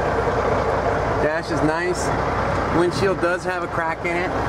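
No technical faults are audible.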